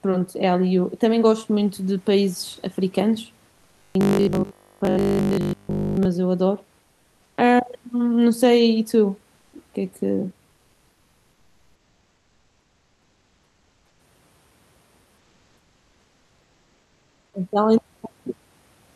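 From 3.79 to 6.05 s the speech takes on a rigid, metallic buzz at 50 Hz, following the syllables only roughly: robotic sound from repeated short buffers. The likely cause is audio arriving too late, with the player looping the last 20 ms or so to fill the gap.

During pauses at 6.81 to 7.37 s, 9.37 to 9.53 s, 10.51 to 13.99 s and 15.17 to 17.33 s, the room noise gives way to a flat, featureless hiss about 1 to 2 dB quieter. This is comfort noise in place of the background, likely from discontinuous transmission such as Opus DTX.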